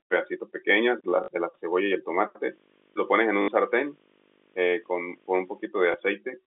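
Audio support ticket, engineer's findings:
Packet loss with last packet repeated: brief robotic stutter at 1.24–1.28 s and 3.42–3.48 s, small blip at 5.92–5.94 s. Receiver replays the last packet, consistent with 20 ms packets.

Video or display buzz: 50 Hz buzz with hash plus a 15.6 kHz whine, 2.43–5.68 s, roughly 20 dB under the speech. Display or video cable coupling into the audio path.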